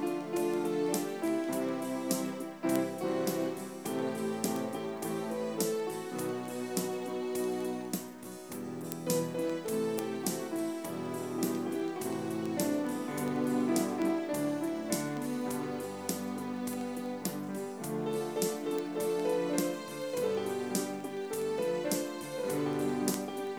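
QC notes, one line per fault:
throughout: low bit depth without dither. The sound is gritty, with grain that rises and falls with the material. This is likely 9-bit truncation without dither, leaving error about 35 dB below the signal. Unlike steady dithered hiss, this error follows the signal.
0.13 to 23.55 s: word clock ticks. Sharp ticks of uneven strength come at a steady rate, roughly every 0.07 s, some 300 in all. An unlocked receiving clock drifting a few hundred ppm drops or repeats one sample at each slip. The even spacing and lack of gaps separate these from dropouts.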